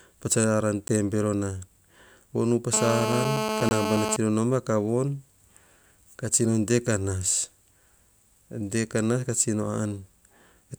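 At 0.88 s, just before "tebero na", the speech ticks rather than falls silent: a block of digital silence about 10 ms long. The output buffer went unfilled, or a calculation produced invalid values, so zeros were played, and the sound cuts out and back abruptly with no fade.

From 2.73 to 4.17 s, ending just before "nao ma", a hard, raspy buzz at about 217 Hz, rich in harmonics and unrelated to the speech, sits only about 2 dB below the speech. This is GSM phone buzz. A nearby 2G phone on a call transmits in bursts 217 times a second, and the audio circuitry rectifies those radio pulses into the signal, giving a near-steady drone.

From 3.69 to 3.71 s, within that buzz, a second block of digital silence lasts 20 ms. It is long enough to register as a short hole rather than a tick.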